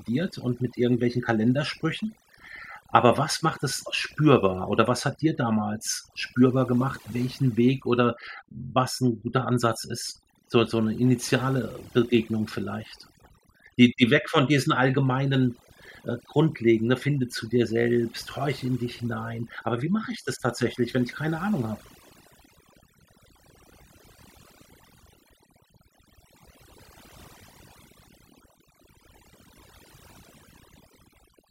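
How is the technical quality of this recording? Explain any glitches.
Overdone noise removal runs through the whole speech clip. The background drops and breaks up into twinkling specks. A noise reducer set too hard is switching off individual frequency bands near its noise estimate, taking quieter parts of the voice along with the noise.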